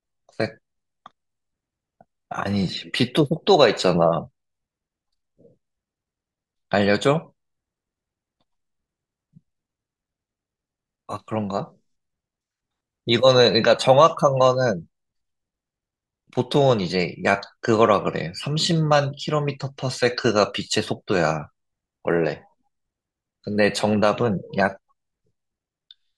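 No technical faults can be heard at any point in the recording.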